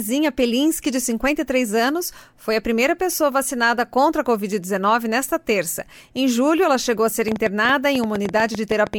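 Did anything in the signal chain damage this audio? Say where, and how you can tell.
Yes. From 7.28 s to 8.95 s there's a train of clicks, about nine a second at uneven spacing, fifteen or so pops of similar shape sitting roughly 10 dB above the sound. That pattern most likely points to interference pickup in the analogue wiring or a struggling interface injecting pulses.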